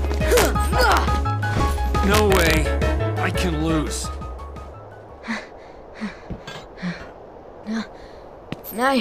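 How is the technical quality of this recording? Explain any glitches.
The recording has a serious technical fault: integer overflow in three places. At 0.32 to 0.45 s, 0.81 to 0.97 s and 2.14 to 2.57 s, the signal ran past the largest value its integer format could hold, by about 3 dB, 1 dB and 2 dB respectively. Instead of being limited, those peaks wrapped around to the opposite sign, jumping across the full range. Each passage is heard as harsh, violent cracking on the loudest moments, far sharper than ordinary clipping.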